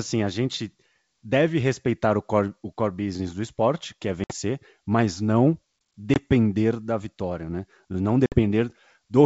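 At 4.24, 6.14 and 8.26 s there is packet loss on an ADPCM call: silent holes of 60, 20 and 60 ms. Unlike a plain dropout, speech resumes slightly distorted while the G.722 decoder's predictor and step size resynchronise.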